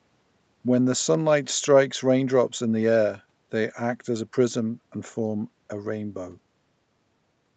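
No technical faults can be heard in this speech, which carries the steady 8 kHz upper limit and usual coding noise of a wideband call codec such as Opus running at a moderate bitrate.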